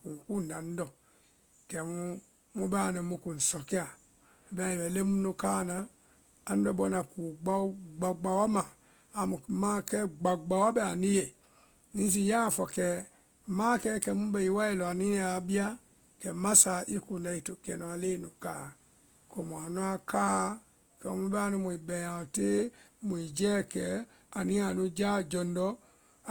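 From start to finish, the speech carries Opus compression damage. It is plainly audible. The voice turns grainy and rough. Tonal parts of the voice sound noisy rather than clean. The top end still extends to about 20.1 kHz, so the band is not narrowed. The likely cause is the codec's music mode running short of bits. It fills starved bands with folded or noise content. That points to a rate around 24 kbps.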